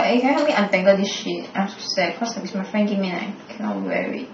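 In this speech recording, the sound turns abruptly duller from 0.82 s to the end, with nothing above 6.3 kHz and stronger codec artefacts, but no gap. It's an adaptive stream at a lower bitrate, consistent with a switch from roughly 96 to about 27 kbit/s AAC after the connection slowed.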